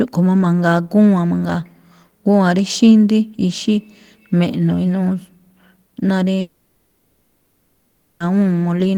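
At 6.40 s the speech cuts out and doesn't properly return until 8.21 s, a gap of about 1.8 s that sounds like a long network dropout. Instead of going dead, the last bit of sound gets smeared on as a buzzy hiss that fades. When the speech picks up again, whatever was said in between is simply gone, most likely because the packets never arrived.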